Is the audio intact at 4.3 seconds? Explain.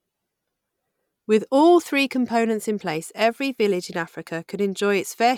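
Yes, the audio is intact at 4.3 seconds, with no fault of any kind audible at that moment.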